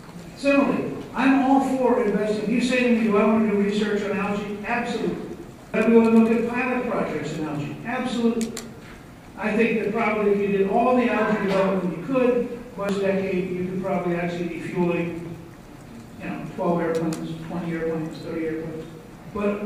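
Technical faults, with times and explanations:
5.74 s, 12.89 s and 16.23 to 16.28 s: damaged data in a compressed stream. Corrupted bytes make the decoder misread frames and lose sync, producing brief glitches.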